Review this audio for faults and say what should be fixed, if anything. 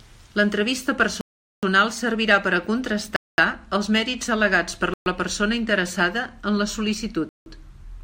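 The speech drops to silence four times: 1.21–1.63 s (0.42 s), 3.16–3.38 s (0.22 s), 4.94–5.06 s (0.12 s) and 7.29–7.46 s (0.17 s), each time resuming abruptly. This likely comes from Bluetooth stalls, where interference delayed packets until the headphone buffer emptied. To prevent it, record through a wired path or reduce 2.4 GHz interference and distance.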